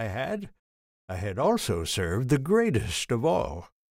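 At 1.44 s a sudden gain jump lifts the level by about 5 dB until the end, sound and background noise together. It likely comes from a gain setting applied without a ramp. The waveform envelope steps up at that instant, and the spectrogram brightens uniformly across all frequencies.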